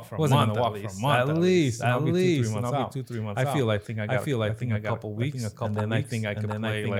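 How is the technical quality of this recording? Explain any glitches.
The recording has one fault that runs for its whole length: a doubled audio track. A second full-band copy of the speech trails the original by roughly 0.7 s, at about the same level. It carries no decay or room colour, so it sounds like a separate overlapping voice rather than an echo. The likely cause is the same signal being captured again through a slower path, or an edit holding two copies out of step.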